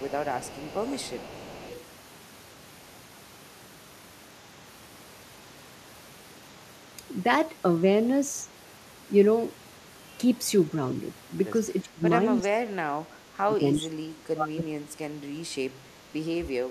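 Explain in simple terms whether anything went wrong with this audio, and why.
Two things went wrong, both tied to the echo control on a speakerphone-style call.

Echo leak: from the start to 1.84 seconds, the far end was likely playing the call through a loudspeaker, and its echo canceller didn't fully remove what its microphone picked up. That leftover was sent back, so you hear a faint, delayed copy of the speech trailing about 0.35 seconds behind the original, like a quiet repeat underneath it.

Speech suppressed in double talk: when both sides talked at the same moment, the echo canceller likely couldn't tell the local talker apart from the loudspeaker echo, so it turned everything down together. The speech drops sharply in a brief dip from 11.82 to 12.03 seconds, then again from 12.21 to 16.03 seconds, where for much of that stretch it sinks to near silence in chunks.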